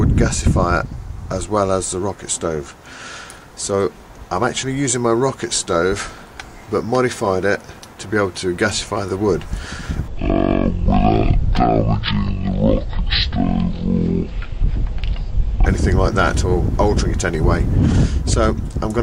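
Stereo read as mono, from 10.08 s to 15.66 s: for this stretch the left and right samples, which alternate in the stream, were taken one after another as if they formed a single channel. Each stereo frame therefore spans two output samples, so the sound plays at half speed and drops a full octave, 12 semitones down. Because the two channels are interleaved rather than identical, a fainter mirrored copy of the sound also shows up in the upper half of the spectrum.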